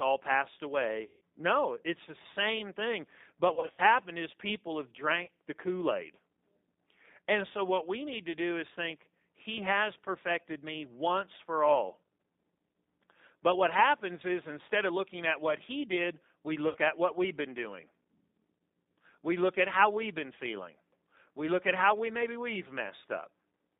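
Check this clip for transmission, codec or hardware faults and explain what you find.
The clip has two faults: codec damage throughout and four bursts of concealed packet loss.

The G.729 codec is present for the whole clip. It runs at 8 kbit/s. The sound is confined to roughly 200 Hz to 3.7 kHz. Speech is rebuilt from a vocal tract model and a few pulses per frame. That makes it plainly rough and slightly synthetic.

VoIP packet loss concealed by the speech codec occurs four times. The spans are 1.03 to 1.21 s, 3.54 to 3.81 s, 5.25 to 5.30 s, and 16.69 to 16.78 s. About 180 ms is missing in the first span. In the second, 150 ms is missing, scattered over 240 ms, with gaps up to 60 ms. The third span loses 30 ms and the fourth 60 ms. The decoder stretches the last pitch and filter while fading the gain. Each gap therefore turns into a buzzy tone or a coloured noise that fades. The speech stays weak briefly after it resumes.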